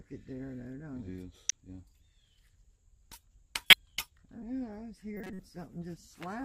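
Corrupt frame decoded at 1.49 to 1.52 s, 3.70 to 3.73 s and 5.17 to 5.40 s: damaged compressed frames, about two each in the first two events and around seven in the last, were played anyway. Misread codes misplace energy across frequencies, producing brief chirps, squeaks, blips or noise bursts.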